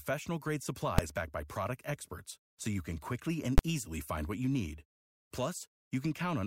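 At 0.98 s, just before "backed by product experts", and again at 3.58 s, between "you can quickly and" and "easily find what you", there's a sharp bang. Both are invalid numbers at full scale: a calculation blew up and pinned the output to its maximum for a brief block, roughly 3 ms then 12 ms, which fits 128- and 512-sample buffers.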